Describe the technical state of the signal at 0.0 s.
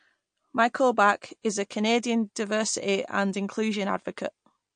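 At 0.0 s the speech already carries plainly audible damage, likely from MP3 compression, and it persists through the whole clip. The encoder, short of bits at what fits a low rate near 48 kbps, drops weaker frequency lines frame by frame, leaving a watery, swirly texture. A spectrogram shows a hard ceiling with nothing above 9.5 kHz and speckled gaps flickering in the upper bands. The waveform itself gives little away.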